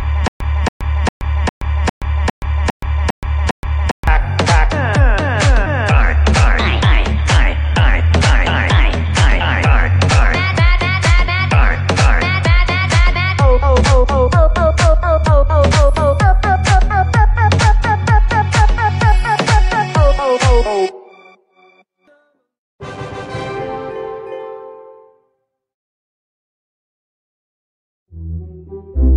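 Already under way at the start and running to 4.07 s, a 0.28 s burst repeats nine times with 0.12 s of dead silence after each. This stutter with silent gaps is likely a stalled player replaying its last fragment at each retry, so the audio meant for that stretch is lost.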